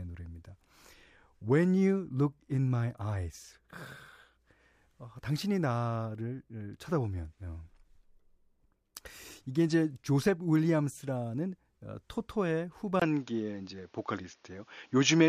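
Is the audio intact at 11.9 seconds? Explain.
Yes, the audio is intact at 11.9 seconds, with no fault to be heard at that moment.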